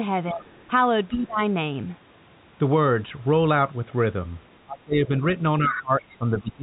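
From 0.29 to 0.52 s the talker's level sags by roughly 15 dB, most likely speech suppressed in double talk: with both ends active, the echo canceller could not tell near speech from loudspeaker echo and attenuated everything. Overlapping it, from 0.40 to 0.63 s, a faint second voice sits about 25 dB under the talker, likely the other side's voice leaking through where echo cancellation left a residue. The same dipping recurs from 1.09 to 1.42 s (about 20 dB deep), from 4.65 to 5.13 s (about 25 dB, the heaviest cut) and from 5.58 s to the end of the clip (about 15 dB), each likely the suppressor clamping down during overlap. Between 5.72 and 5.82 s the leaked far-end voice returns much stronger, only about 10 dB below the talker, as a brief intrusion. Throughout, nothing reaches above 4 kHz, which fits a narrowband G.711 call path.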